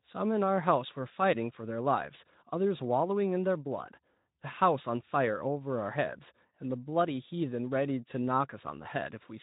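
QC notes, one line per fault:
The speech signal shows no faults, carried over a Speex link at about 15 kbps with light coding texture and no content above roughly 3.8 kHz.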